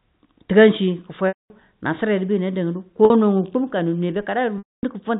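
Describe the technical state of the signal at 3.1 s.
Packet loss with pitch repetition runs from 3.05 to 3.10 s. About 50 ms went missing, and the last pitch period was repeated across the gap, giving a briefly held, buzzy note.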